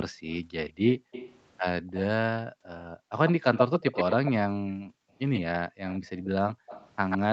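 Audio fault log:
0.1–3.11 s and 4.63–7.32 s: background gated by the echo canceller. The microphone is pulled down during far-end playback. The room sound drops by up to about 40 dB, for about a second in total in the first stretch.
0.31–2.04 s, 3.27–4.31 s, 5.34–7.32 s: echo leak. A delayed copy of the voice follows at 158, 132 and 132 ms. It sits about 15, 5 and 10 dB below the speech. The likely cause is a loudspeaker echo the canceller missed.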